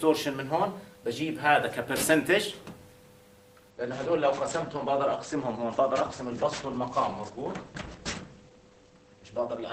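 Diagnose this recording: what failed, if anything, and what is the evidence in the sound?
Network stage: at 3.71 s playback switches to an adaptive stream at a lower bitrate, seamlessly, until the end. Everything above 8.6 kHz disappears and codec artefacts grow, fitting an Opus step down near 12 kbit/s. A spectrogram shows a sudden flat ceiling; the waveform stays unbroken.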